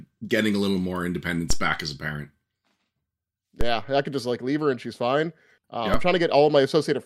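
DC steps occur at 1.50 s, between "getting a little more" and "back as a parent", at 3.61 s, just before "I could just like", and at 5.94 s in this speech clip. Each time the waveform's zero line jumps by about -12 dBFS and then drains away through a 2 Hz high-pass, producing a low thump beneath otherwise unchanged speech.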